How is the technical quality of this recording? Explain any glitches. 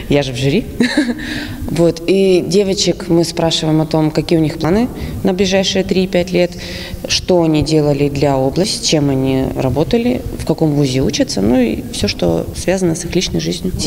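The recording has three audible skips, at 4.64 s, 8.64 s and 12.54 s, each a sudden jump in the sound. These are likely dropped buffers (overrun): samples weren't read before being overwritten, splicing the audio directly. About a tenth, three tenths and two tenths of a second go missing, with no gap. The waveform shows an abrupt discontinuity, and the spectrogram shows a thin vertical broadband line.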